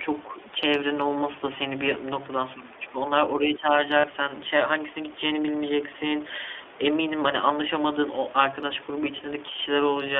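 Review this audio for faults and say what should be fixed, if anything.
The speech runs through an iLBC codec for its whole length. Energy stops above about 3.5 kHz and thins below about 300 Hz, which matches a telephone-band line. The plainly audible coding damage gives the voice a rough, slightly synthetic grain, consistent with iLBC's 15.2 kbps mode coding each frame's excitation independently. A spectrogram would show a hard ceiling near 3.5 kHz and smeared harmonics. Sending the audio over a wideband codec such as Opus would prevent this.

From 4.00 to 4.05 s there are lost iLBC frames. The 40 ms gap fits two dropped 20 ms frames. The decoder fills the hole by repeating the last pitch cycle with added noise, so it sounds like a brief held, buzzy vowel. Because iLBC frames decode independently, the voice snaps back right after. On the waveform this looks like a short run of repeated, slightly noisy periodic cycles, and the spectrogram shows frozen, blurred harmonics across that span. 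A jitter buffer with forward error correction or redundancy would prevent these losses.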